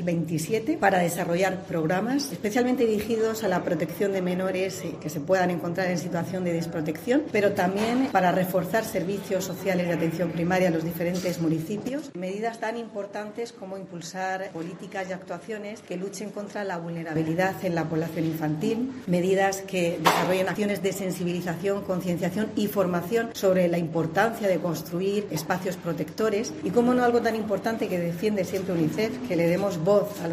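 From 11.89 s to 17.16 s the sound narrows abruptly, with nothing above 11.6 kHz, drops in level by roughly 5 dB and carries a new background noise about 35 dB down, with no gap at either edge. This is likely an input switched to a poorer device.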